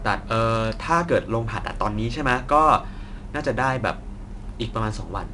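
It's a speech clip with 4-bit ADPCM compression the whole way through. Each sample is coded as a coarse step from a prediction, so a gritty hiss rides on the louder syllables and sharp onsets smear. Nothing comes through above 10.7 kHz, which points to a 22 kHz sample rate at roughly 88 kbps.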